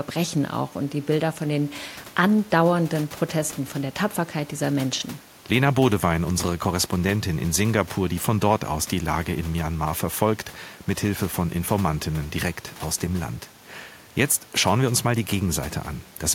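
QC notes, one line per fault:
No technical faults are present in the signal, and the room's background noise sits about 26 dB below the speech as part of the recording.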